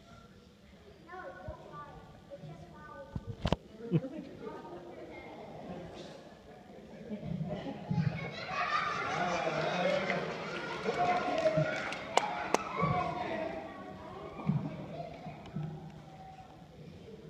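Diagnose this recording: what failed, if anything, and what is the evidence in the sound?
No fault is audible here.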